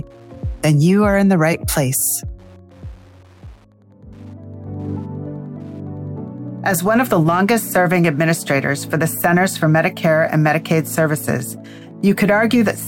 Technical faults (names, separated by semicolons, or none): Wi-Fi interference